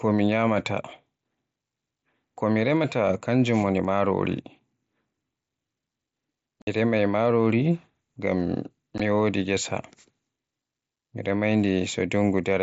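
Unconcealed Bluetooth headset packet loss hits at 6.62 to 6.67 s and again at 8.98 s. Speech packets between headset and phone went missing and silence or an idle pattern filled their place, leaving a 52.5 ms hole and a 15 ms one, both with abrupt edges through the mSBC link.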